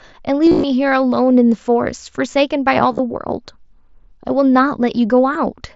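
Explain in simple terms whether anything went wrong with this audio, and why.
Concealed Bluetooth headset packet loss breaks into the speech at 0.46 to 0.64 s, 2.92 to 2.99 s and 5.34 s. Lost headset packets were patched by repeating recent sound, so the gaps come out as a short buzzy hum at full level rather than silence.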